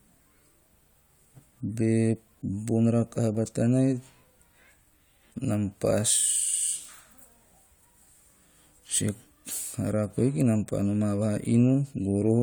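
No technical faults can be heard anywhere in this speech recording. Nothing at any point in the audio stands out as a problem.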